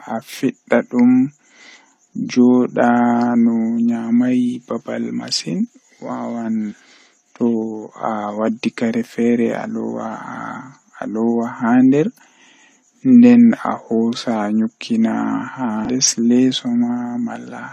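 Speech with damaged data in a compressed stream at 6.68–6.74 s and 15.85–15.89 s: corrupted frames briefly garble the decoder's output.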